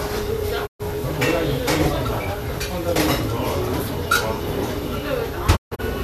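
Digital broadcast dropout at 0.65 s and 5.55 s: the receiver lost valid frames and muted, fading out over 20 ms. The first hole lasts 0.12 s. The second breaks into two gaps across 0.26 s, the longest 0.14 s. That sound is lost.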